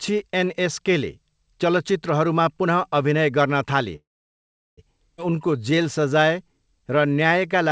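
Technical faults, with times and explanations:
3.96–4.79 s, call audio freeze: the sound stalls, mostly silent for 0.74 s, then resumes where it stopped with nothing lost, likely from delayed packets draining the jitter buffer.
5.17–5.20 s, skip ahead: playback jumps forward with almost no gap, dropping roughly 0.4 s of audio and splicing both sides together nearly directly.
5.30–7.70 s, jitter buffer slow-down: the buffer rebuilds its reserve by repeating pitch periods, adding 262 ms so the audio runs at 89% speed at unchanged pitch.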